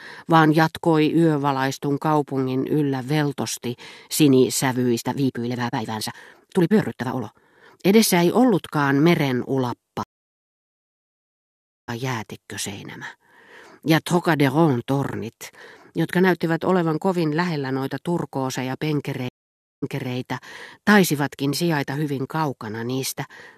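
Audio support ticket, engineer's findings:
Time-stretched section, 4.88–7.78 s. Speech pace jumps abruptly to about 1.65x with pitch unchanged. Rushed delivery. Likely a length-fitting stretch in software, which holds pitch by dropping short slices of audio and splices what remains.

Stream reconnect, 10.03–11.90 s. Dead silence of 1.85 s after "ei ollutkaan meren ulappa". Audio resumes roughly 1.5 s further on, so that material is lost. Cause: the network connection dropped, and the player rejoined the live stream with a fresh decoder.

Stream reconnect, 19.29–20.15 s. Silence of 0.54 s after "kovin lähellä noita turkooseja". Playback resumes 0.33 s earlier, so a short stretch repeats. Cause: the server resent buffered audio to the new decoder after the reconnect.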